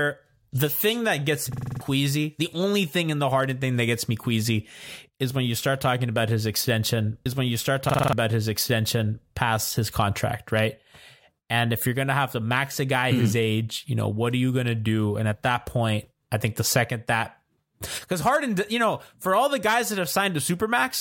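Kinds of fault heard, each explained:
System hang loop: a frozen driver left the hardware cycling one 46 ms buffer, which fits 2048 samples, giving a 21.5 Hz stutter at 1.53 s and 7.90 s.
Stream segment repeated: one segment was queued twice, so about 2 s of audio replays between 7.25 s and 9.27 s, with a blip at the jump back.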